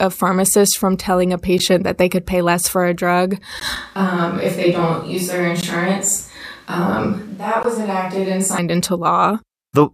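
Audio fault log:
1.59, 3.60, 5.61, 7.63 s, gap at a join of encoded pieces: brief dropouts of about 11 ms at the first (between "pharmacist from telling a" and "that they could pay") and 16 ms at the rest, the second just after "less for a drug". They recur every 2.0 s, where separately encoded pieces were joined untrimmed, so encoder start delay and end padding remain as short silences with smeared edges.
3.76–8.58 s, switch to a distant microphone: just after "less for a drug" the sound turns suddenly roomy and hollow, thinner in bass, about 5 dB quieter, with room noise roughly 35 dB below it, until it snaps back. This likely comes from the recording changing over to a farther microphone.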